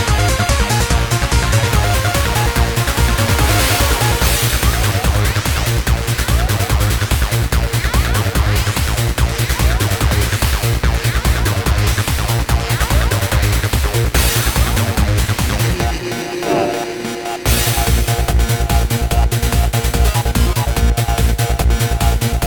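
From 1.67 s onward, periodic clock jitter shakes the converter's sampling clock at around 2 kHz, adding sidebands that give high content a rough, metallic edge.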